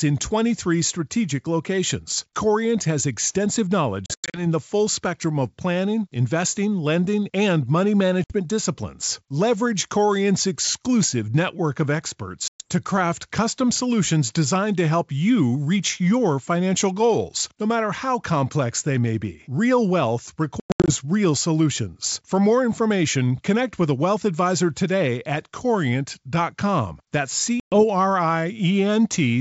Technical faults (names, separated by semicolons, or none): packet loss on an ADPCM call